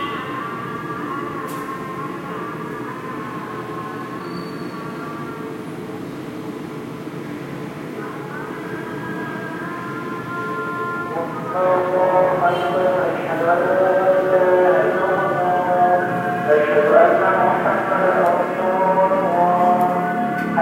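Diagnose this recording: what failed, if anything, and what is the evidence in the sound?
What failed is frame ordering, most likely somewhere on the network leg, where frames out of order reached the decoder and got played as they arrived. At 1.28 to 1.34 s two adjacent blocks of about 26 ms each swap places, which fits single codec frames. At 15.02 to 15.19 s it's bigger, with two runs of roughly 78 ms, three frames each, exchanged. Both spots give a short garbled flutter, and nothing goes missing.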